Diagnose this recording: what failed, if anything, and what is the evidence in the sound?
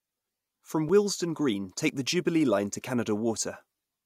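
A block of digital silence appears twice in this speech, at 0.89 s and 1.89 s, each a 5 ms drop to silence, short enough to be heard as a tick or dip. That points to a buffer-stage underrun, where output wasn't filled in time. A plain click wouldn't contain a silent gap.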